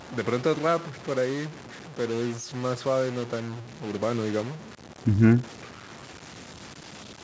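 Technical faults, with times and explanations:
Throughout, stuck bit: distortion sits on the speech and pauses fill with noise, likely from one data bit held fixed, shifting about half the samples by its weight. Unlike clipping, the grit persists in quiet gaps, not just loud peaks.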